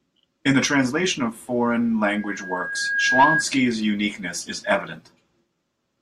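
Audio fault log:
2.11–3.47 s loudspeaker feedback squeal: a 1.6 kHz tone swells over about a second to about 5 dB above the speech, because the microphone-loudspeaker loop's gain exceeds one there.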